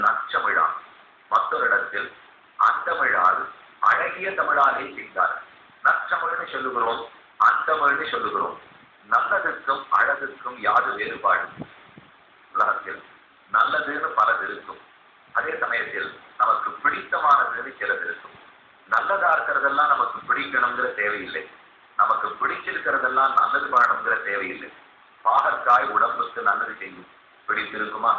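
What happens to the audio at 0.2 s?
Nothing goes wrong at 0.2 s; the audio plays through that moment intact, with no dropout, click, distortion or other fault to be heard.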